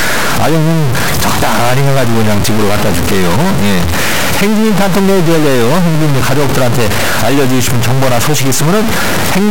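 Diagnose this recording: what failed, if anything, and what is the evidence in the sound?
Harsh buzz throughout, with noise filling the pauses. This is likely a stuck bit in the converter, offsetting half the samples by about -5 dBFS. On a waveform this shows as jumps, and on a spectrogram as broadband haze.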